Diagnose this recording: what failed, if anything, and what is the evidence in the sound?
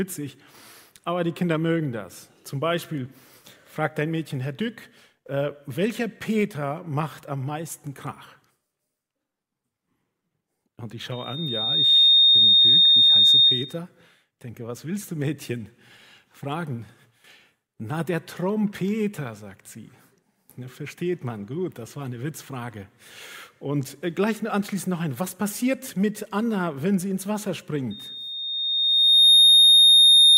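Loudspeaker feedback squeal at playback: at 11.11–13.79 s and 27.90–30.38 s a 3.7 kHz tone swells well above the sound, a bright spectrogram line, as loop gain exceeds one.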